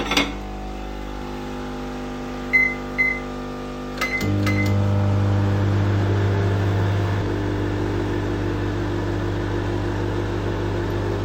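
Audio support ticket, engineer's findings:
Doubled audio track, 1.21 s to 7.21 s. Second full-band copy trails the original by about half a second, roughly 5 dB down, with no decay or room colour. It cuts in and out abruptly at both ends. Likely cause: a slower second capture path or an edit holding two offset copies. Spectrogram shows every event repeated as a fainter twin at a fixed lag. The waveform shows a matching echo envelope that appears and vanishes as a hard step.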